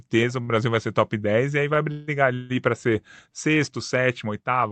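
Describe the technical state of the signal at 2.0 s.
A call audio freeze spans 1.91 to 2.10 s. The jitter buffer likely ran dry. The last sound stretches into a fading buzz or hiss. Nothing is lost.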